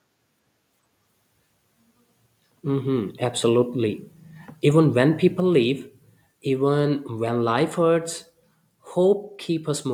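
At 5.4 s the microphone volume stepped down, most likely because the call software judged the input too hot and cut the device's capture gain in a single move rather than easing it down. Everything the microphone picks up drops together by about 3 dB: the speech and the background beneath it fall at the same instant and stay at the new, lower level, so the change sounds like an abrupt step.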